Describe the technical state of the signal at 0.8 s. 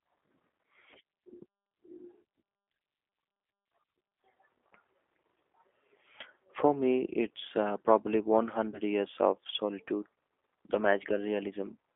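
At 0.8 s, as throughout the clip, the speech passes through a G.729 codec, rebuilt every 10 ms from a vocal-tract filter, pitch predictor and pulses, which fits an 8 kbit/s stream. Only 300 Hz to 3.5 kHz survives, so it sounds thin, rough and plainly synthetic.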